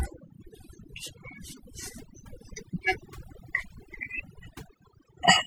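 From start to finish the background sits at near silence broken by twinkling specks. This is overdone noise removal: a noise reducer set too hard has pulled frequency bands near its noise estimate down or out, taking quieter parts of the speech with them.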